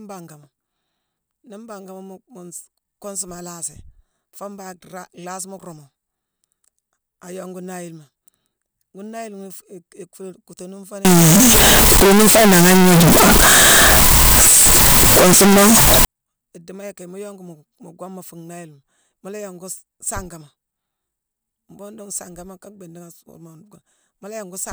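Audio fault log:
11.05–16.05 s, float read as integer: for five seconds the speech jumps to a harsh, nearly square, very loud waveform sitting at an almost fixed, high level, with background noise raised to match the speech. This likely comes from 32-bit float samples being read as 32-bit integers, so the sign and exponent bits set each value. Unlike ordinary clipping, quiet passages are just as loud as speech, yet pitch can still be followed.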